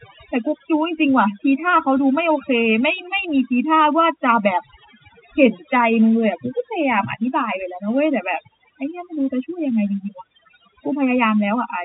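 Overdone noise removal runs through the whole speech clip: a noise reducer set too aggressively switches individual frequency bands off whenever they sit near its noise estimate, taking the quieter edges of the speech with them. The pauses fall to near silence with twinkling specks. On a spectrogram the background is dark and peppered with isolated bright dots, and the speech looks ragged, with holes; the waveform shows almost flat gaps. The telephone band stops near 3.8 kHz, which fits 64 kbps G.711 mu-law.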